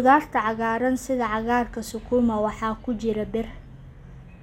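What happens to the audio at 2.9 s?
Nothing goes wrong at 2.9 s: the speech there plays through intact, with no dropout, click or distortion.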